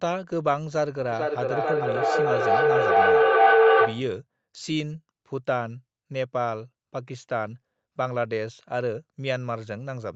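From 1.11 s to 4.17 s there is feedback howl. Another device in the same room was on the call, so the sound looped from loudspeaker back into the microphone and gained level on each pass. A tone around 500 Hz builds until it peaks about 9 dB above the speech, the loop's delay being roughly 0.4 s, then stops. Throughout, nothing reaches above 8 kHz.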